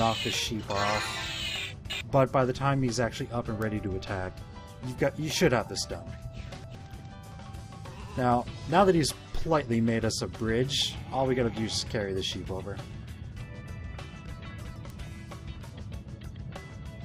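Two bit error spikes break into the audio, one at 3.62 s and one at 14.90 s, each a single corrupted sample reaching about -16 dBFS and about -22 dBFS respectively. A flipped bit makes the sample value jump by a power of two and snap straight back, so each is heard as one sharp tick unrelated to the surrounding sound. A waveform shows a lone vertical needle, and a spectrogram a thin full-height line across all frequencies.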